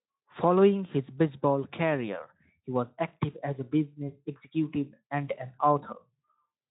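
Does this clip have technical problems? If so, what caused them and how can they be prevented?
No, there is nothing to fix: the Speex coding at 15 kbps, with its light coding texture and nothing above 3.8 kHz, is the codec working normally.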